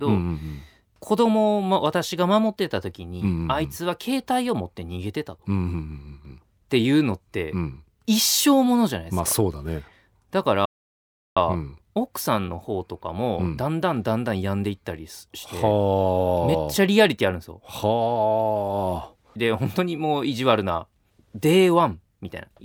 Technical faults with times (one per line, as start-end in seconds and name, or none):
10.65-11.37 playback stall